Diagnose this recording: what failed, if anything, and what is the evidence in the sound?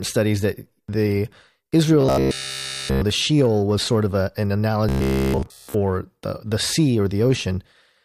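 The driver or buffer stage likely ran dry twice, and playback covered each gap by looping one short stretch of audio. The result is robotic sound from repeated short buffers. From 2.01 to 3.03 s and again from 4.89 to 5.74 s, essentially all of the speech turns into a rigid, metallic buzz at 66.7 Hz. That fixed pitch points to a 15 ms segment repeating while fresh audio is skipped, so the speech contour survives only roughly.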